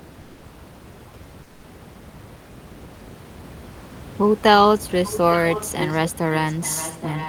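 From 1.43 to 1.63 s, a 200 ms stretch of the room noise is replaced by comfort noise in place of the background. The real background, which sits about 23 dB under the speech, gives way to a smooth, featureless hiss about 5 dB quieter, then returns. Unlike a dropout or noise gate, the pause never goes silent; it is filled with synthetic noise, likely generated by the receiver because discontinuous transmission, such as Opus DTX, halted sending during a gap in speech.

From 6.3 s to the end, an echo leak brings back a delayed copy of the speech 821 ms after the original, sitting roughly 15 dB down. The far side is likely playing the call through a loudspeaker, and its echo canceller has let part of that pickup through. What separates this from room reverberation is the separate, recognisable repeat arriving most of a second later, rather than a smear that trails directly off each sound.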